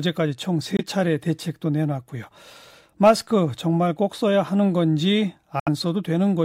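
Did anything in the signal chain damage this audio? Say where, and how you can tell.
Yes, a Bluetooth dropout, heard twice: from 0.77 to 0.81 s and again from 5.60 to 5.68 s. In each spot the speech falls to silence and then resumes further along, as if it had kept playing through the hole. The damage happened at the wireless link to the headphones. The likely cause is audio packets arriving too late and being discarded. The gap lengths fit one lost frame of about 23 ms, then three.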